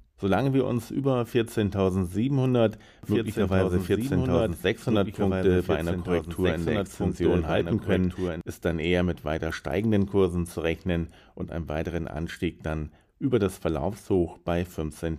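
A doubled audio track runs from 3.03 to 8.41 s: a full-band copy about two seconds late and roughly 5 dB quieter, likely from a second, slower capture path, showing as an offset repeat of every spectrogram event.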